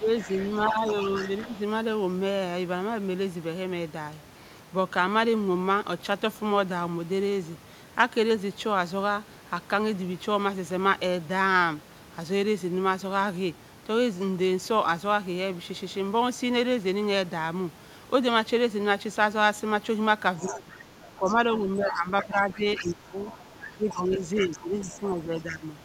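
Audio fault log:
0.00–0.85 s and 1.40–1.53 s, speech suppressed in double talk: The near voice dips while the far side talks over it. The first dip is about 10 dB and the second about 15 dB. Together they last around half a second. The likely cause is an echo canceller that cannot split the talker from the loudspeaker echo, so it turns both down.
0.21–1.60 s, other side's voice leaking through: A second voice sits under the talker at about 15 dB below. The likely cause is loudspeaker playback the echo canceller did not fully remove.
20.39–25.66 s, speech suppressed in double talk: The talker is pushed down again, by up to about 15 dB. The dips add up to roughly three seconds. They come in patches during overlapping talk. This is likely the canceller suppressing both voices at once.
20.39–20.59 s and 21.27–25.51 s, other side's voice leaking through: The far voice returns at about 15 dB below the talker. 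It comes first as a brief scrap and then as a long stretch. It is likely loudspeaker echo left in the microphone signal.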